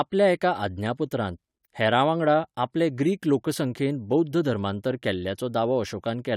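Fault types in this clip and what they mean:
No fault types can be heard in this clip.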